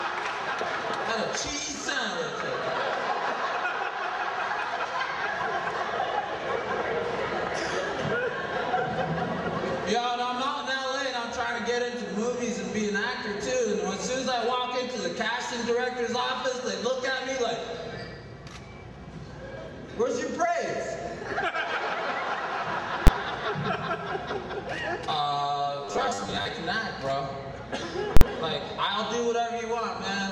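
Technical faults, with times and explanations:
23.07: invalid numbers at full scale. A calculation produced infinite or invalid values, and the output jumped to one extreme and stayed flat there. The block lasts about 12 ms, which fits a 512-sample block. It is too short for a gap, so it is heard as a single loud bang.
25.85 to 26.49: robotic sound from repeated short buffers. The sound becomes a rigid, metallic buzz at 100 Hz. That rate points to a 10 ms chunk being replayed. The likely cause is new audio arriving too seldom. About half the stretch is repeats, and the real audio is skipped.
28.17 to 28.21: invalid numbers at full scale. Invalid values again pinned the output at one extreme for about 46 ms, which fits a 2048-sample block. The jump onto the flat value and the jump off it each give a very loud pop, with no sound between.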